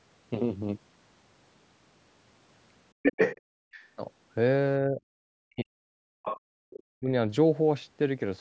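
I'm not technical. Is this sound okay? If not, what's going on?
No. This is a call recording with three kinds of problems.

First, the other side's voice leaking through. From 3.02 to 3.41 seconds a second voice comes in, and it is louder than the talker. Shorter, fainter scraps follow at 3.71 to 3.85, 6.25 to 6.4 and 6.7 to 6.8 seconds. The likely cause is a loudspeaker playing the other person, with the device's echo canceller failing to remove all of it from the microphone.

Second, background gated by the echo canceller. Right after that first leak, from 3.41 to 3.71 seconds, the room sound drops almost to silence. The canceller heard the loudspeaker and shut the microphone down hard. The background comes back about a third of a second later, when it lets go.

Third, speech suppressed in double talk. From 4.83 to 6.27 seconds, and again from 6.81 to 7.1 seconds, the talker's voice sinks away and nearly vanishes. 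This was likely both people speaking at once. The canceller could not tell the talker apart from the echo, so it turned everything down together. The first stretch is the long one, about a second and a half.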